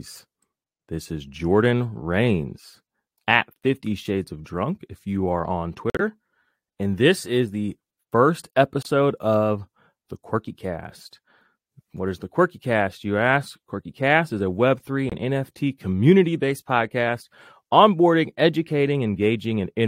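Speech with three dropouts from corrupt frames being muted: the decoder rejected damaged compressed frames and the player substituted silence, so the sound cuts off abruptly rather than fading. The gaps are at 5.9 s for about 0.10 s, just after "if you are on", and at 8.83 s for 0.04 s, between "this is the first" and "of the", and at 15.08 s for 0.05 s. The longest gap suggests several consecutive frames were lost. Timing is preserved. On a waveform each gap is a flat line with sharp edges, and on a spectrogram it is an empty vertical band cutting across all frequencies.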